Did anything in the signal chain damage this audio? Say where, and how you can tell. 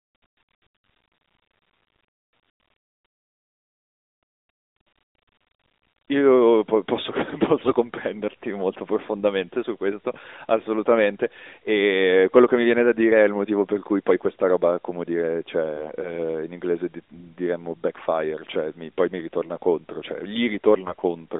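Yes. The damage is at the network stage, as AMR bit errors. Two short bursts turn the sound hoarse and scratchy, with a gargly edge, from 7.58 to 7.72 s and from 20.86 to 21.02 s. Each lasts about 0.15 s, which fits seven to nine codec frames. Pitch and level roughly hold. Only the texture breaks. A weak link flipped the less protected bits, at roughly 5 and 7 percent. The checks still passed, so the decoder rebuilt wrong pulses and gains.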